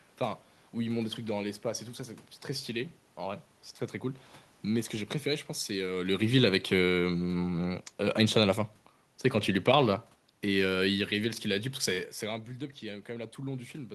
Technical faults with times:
9.44-11.74 automatic gain falling

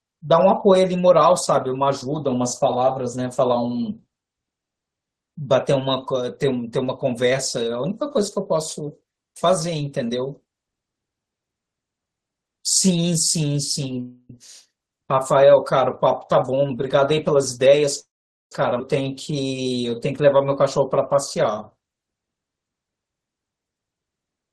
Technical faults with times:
14.00-14.30 call audio freeze
16.35-17.82 jitter buffer speed-up
17.99-18.52 call audio freeze
18.79 skip ahead

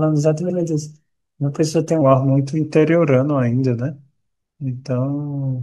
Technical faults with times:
0.49-0.58 repeated frames
2.01-5.62 section at the wrong speed

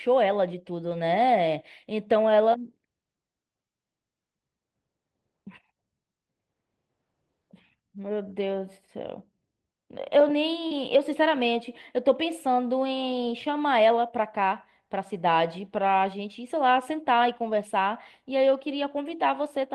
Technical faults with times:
0.85-0.95 lost packet rebuilt from error correction
8.49-8.55 lost packet rebuilt from error correction
10.67-10.73 short concealed packet loss
10.71 lost packet rebuilt from error correction
17.47-17.53 lost packet rebuilt from error correction

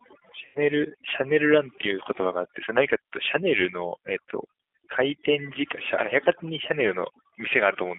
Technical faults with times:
0.00-7.99 overdone noise removal
0.00-7.99 G.729 codec
0.45-0.59 VoIP packet loss concealed by the speech codec

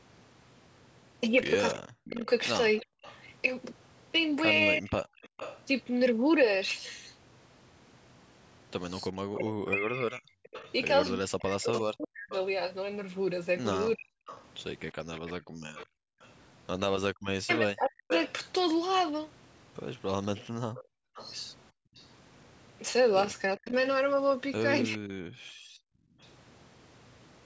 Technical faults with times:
1.71-5.62 echo leak
1.75-4.91 speech suppressed in double talk
2.86-5.30 background gated by the echo canceller
9.10-14.22 speech suppressed in double talk
9.49-26.27 echo leak
15.40-16.20 background gated by the echo canceller
17.39-18.11 speech suppressed in double talk
20.84-21.97 background gated by the echo canceller
23.58-25.09 speech suppressed in double talk
25.37-26.20 background gated by the echo canceller

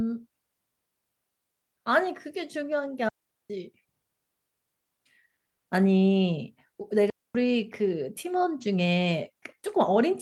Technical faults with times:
3.09-3.50 digital wireless dropout
7.10-7.35 digital wireless dropout

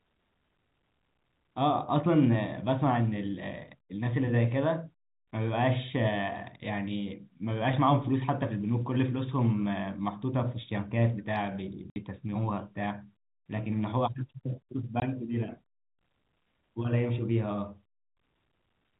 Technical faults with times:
11.90-11.96 packet loss filled with silence
15.00 packet loss filled with silence

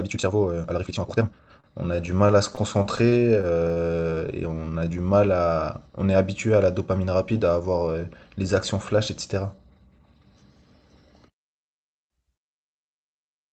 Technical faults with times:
0.00-1.50 time-stretched section
1.60-4.20 repeated stalls (stutter)
4.03-5.03 jitter buffer slow-down
6.87-7.95 jitter buffer speed-up

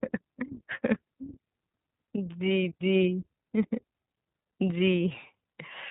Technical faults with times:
0.00-5.90 iLBC codec

